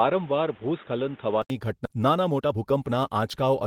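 From the start to 1.5 s the speech sounds narrow and boxy, with nothing above 3.8 kHz, and then opens up after a short silence of about 80 ms at the switch. This is most likely an input switched to a poorer device, such as a headset's call profile, with its own tone and a steady noise floor roughly 30 dB below the speech. The level stays about the same. On a spectrogram the energy stops sharply at a flat ceiling near 3.8 kHz until 1.5 s, a faint band of noise fills the space beneath the speech, and a brief blank column marks the changeover, after which the upper frequencies reappear.

At 1.85 to 1.87 s there is a skip ahead: roughly 0.7 s of audio never plays, and the two sides are butted together with no gap or fill. The speech lurches forward mid-flow, which cuts the delay by about the same amount. In the waveform the envelope changes abruptly at that seam, and on the spectrogram the harmonic traces break and restart without any pause between them.

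From 1.95 to 3.57 s comes a jitter buffer speed-up. The receiver repeatedly cuts out short pitch-period pieces to drain the excess it had buffered, running the speech at about 116% speed while the pitch stays the same, and removes around 0.3 s in total. The delivery sounds hurried. On the spectrogram the harmonics stay at the same height, but syllables and pauses are compressed in time, and the waveform shows periods of unchanged length with tiny splice points throughout.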